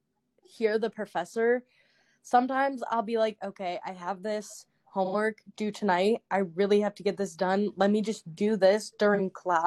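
At 5.05–5.15 s and again at 9.14–9.19 s there's AAC frame loss with concealment: the decoder patches over missing audio, roughly two frames then one, leaving brief smeared, phasey blips.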